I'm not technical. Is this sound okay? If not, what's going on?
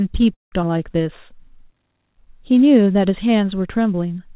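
No. There are three problems early in this speech clip. From 0.34 to 0.54 s there is a call audio freeze: the sound stalls and then goes quiet, likely because network packets arrived late, and nothing is lost. From 0.62 to 0.65 s the audio does a skip ahead, jumping forward so that about a tenth of a second of speech is cut out. From 0.71 to 1.99 s a jitter buffer slow-down makes the speech play at about 91% speed, drawn out but not lower in pitch. Throughout, the sound is muffled because the call system carries nothing above 4 kHz.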